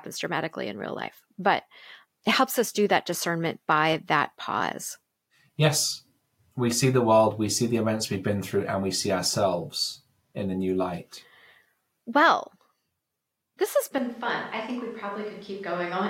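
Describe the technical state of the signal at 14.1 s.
Switch to a distant microphone, from 13.98 s after "this has" to the end. The close microphone's feed likely dropped out, leaving a far pickup. At 14.1 s the speech sounds roomy and hollow, thinner in bass, roughly 10 dB quieter, with room noise about 30 dB below it.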